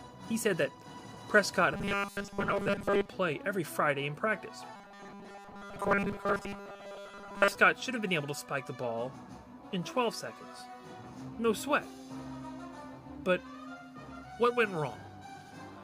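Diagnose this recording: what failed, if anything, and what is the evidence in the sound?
Robotic sound from repeated short buffers runs from 1.74 to 3.13 s and again from 4.76 to 7.56 s. Both stretches carry a rigid, metallic buzz at 200 Hz that still loosely follows the sound's shape. The failure is likely at the driver or buffer stage. Fresh audio arrived too seldom, so a 5 ms segment was replayed to fill the gaps, displacing most of the real signal and imposing that fixed 200 Hz pitch.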